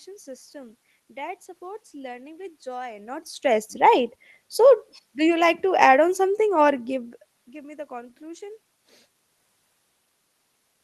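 No technical faults can be heard in the speech; the room noise and the level shifts near 3 s and 7 s, where the talker moves relative to the microphone, belong to the recording itself.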